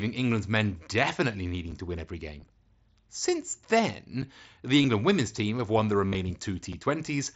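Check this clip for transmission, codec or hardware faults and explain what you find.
There are two faults here: gaps between chunks, and concealed Bluetooth headset packet loss. The speech is coming through the Bluetooth mSBC headset codec, which adds only light codec damage.

Gap between chunks, at 1.71, 4.22 and 6.73 s: each is a hole of about 7 ms, spaced every 2.5 s. The audio was handled in 2.5-second chunks, with a bit of silence left at each join. Nothing is lost, but you hear a brief dropout on that regular beat.

Concealed Bluetooth headset packet loss, at 2.40, 3.78 and 4.83 s, and again from 6.06 to 6.15 s: the first three lose about 15 ms each. The last loses 67.5 ms spread over 90 ms, with the longest run being 45 ms. The receiver fills each missing bit by repeating the closest-matching recent stretch, so the longer run comes out as a held buzzy tone with a warble where real audio resumes.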